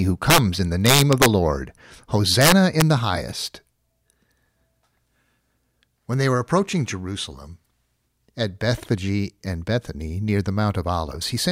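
Integer overflow occurs three times in this speech: 0.30 to 0.38 s, just before "in the"; 0.86 to 1.26 s, right after "in the"; and 2.41 to 2.82 s, leading into "the highest". Loud passages were pushed past the integer ceiling, by about 6 dB in the first event and about 4 dB in the other two. Instead of being limited, the peaks wrapped to the opposite sign. Each one flips across the full range and is heard as sharp cracks, well beyond ordinary clipping.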